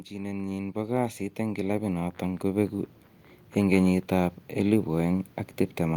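From 0.09 s to 2.81 s the level climbs steadily by about 12 dB. This is automatic gain rising: the gain control judged the input too quiet and raised its gain gradually. What sets it apart from a talker moving closer to the microphone is that the background noise swells right along with the speech, at the same rate. The slow ramp over nearly three seconds also rules out a sudden manual level jump.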